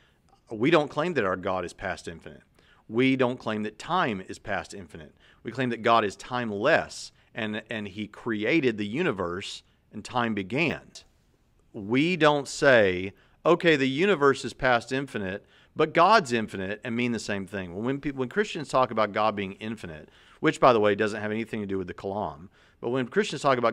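A speech clip, and there's one quick glitch at about 10.7 s, right after "the universe and time": chunks out of order. A 10 ms chunk turned up one chunk late and got played after its neighbour, so you hear a tiny jumbled blip.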